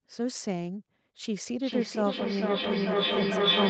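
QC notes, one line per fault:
1.54 s to the end (3.70 s), feedback echo between two devices: a second device is playing the call back into the mic, so the speech returns roughly every 400 ms, thinner and ringier each pass, building to about 5 dB over the original instead of decaying.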